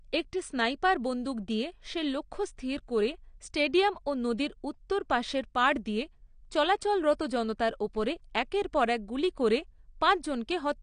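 Dull, band-limited speech fills the whole clip, with nothing above about 9.6 kHz and a plainly audible warbling, fizzy smear on sustained vowels and sibilants. The likely cause is AAC compression, consistent with AAC-LC at a low bitrate that fits roughly 32 kbps. With so few bits per frame, the encoder lowers its cut-off and coarsely quantises the remaining frequency lines, leaving gaps or noisy fill that shift from frame to frame and produce the swirling texture.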